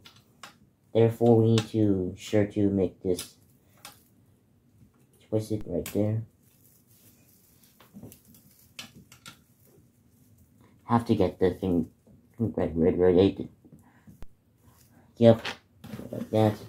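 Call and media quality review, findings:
DC step at 5.61 s and 14.23 s: low thump, zero-line offset of about -30 dBFS decaying via a 5 Hz high-pass. Unlike a dropout, the sound continues unbroken.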